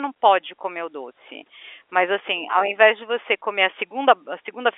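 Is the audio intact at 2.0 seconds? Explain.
Yes, at 2.0 seconds the speech is intact, carried through ordinary G.711 telephone coding with its usual band limit and no fault at that moment.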